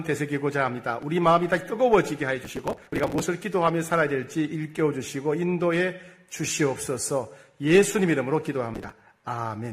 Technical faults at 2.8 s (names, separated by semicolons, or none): processor overload crackle